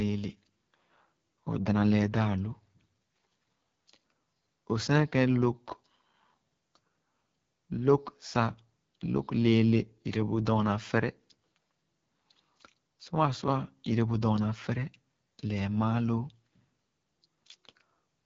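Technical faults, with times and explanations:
Throughout, AMR wideband (HD Voice) codec. The speech has a rough, raspy edge from start to end. There is nothing above 7.5 kHz. The codec rebuilds the voice from pulses driving a vocal tract model up to 6.4 kHz. It fills the band just above that with shaped noise, not real detail. The damage is plainly audible, which points to one of the lowest rates, about 8.85 kbit/s.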